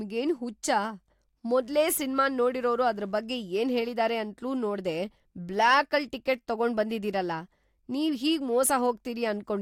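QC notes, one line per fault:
1.62–3.12 s, mains buzz: a steady, raspy buzz sits under the speech at a low level, roughly 35 dB below it, ending just before "ಬಗ್ಗೆ ಏನ್ಹೇಳಿದಾರೆ ಅಂತ್ಲೂ ನೋಡ್ದೇ". Sharp switching spikes at twice the 50 Hz mains rate spray harmonics up into the kilohertz range, giving the rasp.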